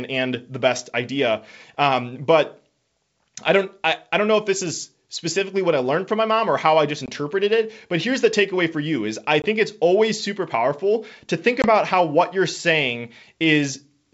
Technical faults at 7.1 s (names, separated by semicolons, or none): packet loss on an ADPCM call